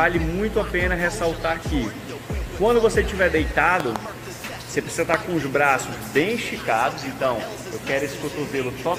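Two loud pops sit on top of the sound: a quick double pop from 3.80 to 3.98 s, about 15 dB above the signal, and a single louder one, about 20 dB up, at 5.14 to 5.16 s, likely voltage spikes from a switch, plug or static.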